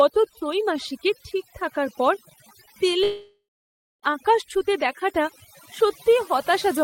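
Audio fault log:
Throughout: overdone noise removal. The background drops and breaks up into small twinkling specks. The noise reduction was set too aggressively, so individual frequency bands are pushed far down or switched off whenever their level sits close to the estimated noise floor. Quieter components of the speech fall into that range and are removed along with the noise. The isolated bands that survive flicker on and off, producing the specks.
3.03 to 4.06 s: long network dropout, the likely cause of a gap of about 1.0 s. At the start, the last sound is extended as a fading buzz or hiss. That is the receiver concealing missing data by repeating and decaying what it last had. Once that runs out, about 0.61 s of silence follows. Speech resumes at 4.06 s with no recovery of the lost stretch, so that part of the audio is simply gone.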